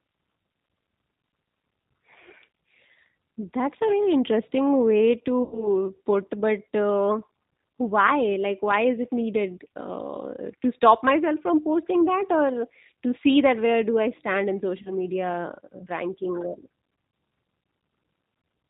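Throughout, the audio has the band-limited, slightly rough and synthetic quality of the G.729 codec, consistent with an 8 kbit/s stream. Nothing above 4 kHz survives, and the damage is plainly audible because each frame is rebuilt from a vocal-tract filter, pitch predictor and sparse pulses.

At 5.43 s, after "very interesting way", VoIP packet loss concealed by the speech codec stretches the last sound into a buzzy tone or coloured noise that fades until 5.68 s. The gap points to about 90 ms lost, likely three packets, with recovery lagging because each frame builds on the last. After "do I stand in", a shorter concealment runs from 14.82 s to 14.93 s, covering roughly 30 ms, or one packet, with weak, distorted sound as the decoder resynchronises.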